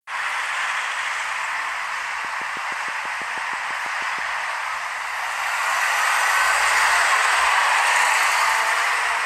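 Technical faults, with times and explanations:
2.25–4.20 s, train of clicks: likely interference or a faulty connection injecting regular pulses, about 15 ticks at 6.2 per second, roughly as loud as the sound.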